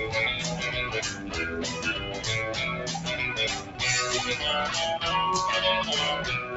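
Right from the start you can hear a noise suppressor applied to music or sounds. It's a speech-tuned suppressor that never got switched off, so it keeps treating sustained content and ambience as noise and pulling it down, with the gain swinging by around 5 dB as it changes its mind. Sharp onsets come through fine, but anything held or decaying sags, so the whole thing breathes and pumps and feels thinner than it should. The top end stops at about 8 kHz, which is just the call path's bandwidth.

On top of that there are three spots where the suppressor cuts the sound harder: 1.11 to 1.33 s, 2.04 to 2.24 s, and 3.59 to 3.81 s, each lasting about a fifth of a second. It dips by about 6 dB at the first, about 5 dB at the second and about 8 dB at the third. It's the sustained or fading parts that get cut, so tails drop away early and the level briefly sinks before recovering, while the transients stay intact.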